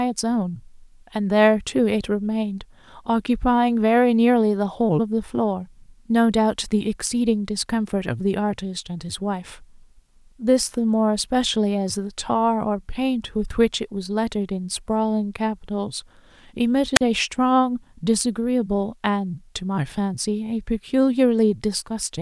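A wireless microphone squelch dropout occurs at 16.95 s and lasts until 17.01 s. The radio link from an analogue FM transmitter weakened enough that the receiver's squelch gate shut the output to keep it from spilling raw static. A short flare of hiss gives way to a hole of near silence of about 40 ms, then the signal recovers and the speech cuts back in.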